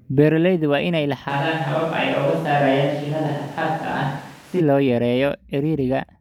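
Just after "waa inay", at 1.31 s, the voice turns suddenly roomy and hollow, thinner in the bass, with little change in level and background noise about 25 dB below it, until 4.59 s. This is likely a switch to a distant microphone replacing the close one.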